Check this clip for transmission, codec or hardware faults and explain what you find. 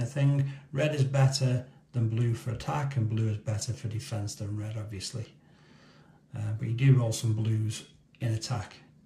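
Periodic clock jitter runs through the whole clip. An interfering tone of around 1.5 kHz shakes the converter clock, so every component gains sidebands at that spacing. This gives a rough, metallic edge, with parallel spectrogram lines flanking each component.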